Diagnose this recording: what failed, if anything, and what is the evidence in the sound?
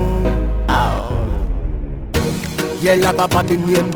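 Periodic clock jitter at the converter: interference modulates the sampling clock at around 2 kHz throughout, adding sidebands that give a metallic roughness to everything heard.

Call bitrate drop in call processing and codec: from 1.43 s to the end the coding turns coarse and muffled, which fits a fall from 64 to 13 kbps.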